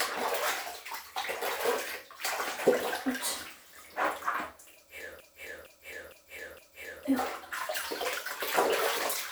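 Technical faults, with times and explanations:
5.20 to 7.05 s, broken-record loop: a 0.46 s fragment of sound plays four times back to back, each pass identical, then the audio resumes with the intervening material missing. This is likely a stall in the player, encoder or stream that kept resending the last fragment it held. Unlike an echo or reverb tail, the copies do not fade or blur; unlike a brief stutter, the loop is long and continues for nearly two seconds.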